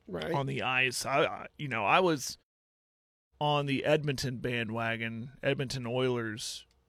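No technical faults can be heard anywhere in the speech. In the pauses the output fades to silence as intended and comes back in time for the next sound, with only very quiet sound lost.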